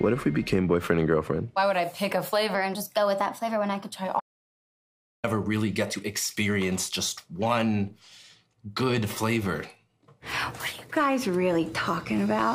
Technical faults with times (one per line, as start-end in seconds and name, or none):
2.54-3.96 section at the wrong speed
4.20-5.24 audio dropout to silence